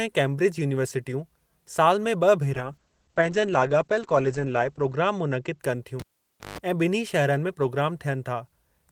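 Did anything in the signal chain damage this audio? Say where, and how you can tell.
Yes. Call bitrate drop, 2.56 to 5.65 s, in the codec stage: the speech turns coarse and muffled, with highs cut at 8 kHz, fitting a fall from about 32 to 10 kbps.

Cable pulled and plugged in, 6.00 to 6.58 s, in the analogue wiring: a pop, 0.54 s of near silence, a 0.16 s burst of 50 Hz mains buzz, then another pop.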